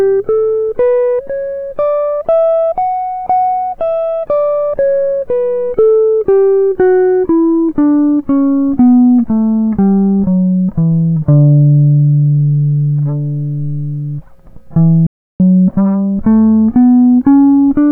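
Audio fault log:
15.07–15.40 s, playback stall: the music just drops out cold for about a third of a second, roughly 330 ms of dead silence, then picks back up. It stops right in the middle of the flow. That pattern most likely comes from the player starving for data or having its output thread held up, so nothing reached the output until it caught up.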